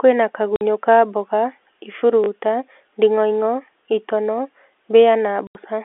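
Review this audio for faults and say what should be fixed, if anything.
Packet loss filled with silence shows up twice. There's a hole from 0.56 to 0.61 s, about 50 ms, and a longer one from 5.47 to 5.55 s, about 80 ms. Both gaps drop straight to dead silence with hard edges, and their lengths fit 10 ms packets going missing in a run, five in the first and eight in the second. The receiver just played nothing where the audio should have been. To prevent it, turn on packet loss concealment at the receiver, or add FEC or redundancy on the sender side, so lost packets get patched rather than muted.

There's a repeated buffer from 2.24 to 2.28 s. The same short slice of sound plays and then comes round twice more, with a hard join each time, so you get a quick stutter. The repeat length fits a 20 ms buffer being replayed because fresh audio didn't turn up in time. Nothing seems to go missing, because the stream just stalls and then carries on. 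To prevent it, give the playout path more headroom, with a larger jitter or device buffer or steadier scheduling of the audio thread, so it never runs dry.

The G.711 mu-law line band of about 300 Hz to 3.5 kHz is just the telephone format doing its normal thing.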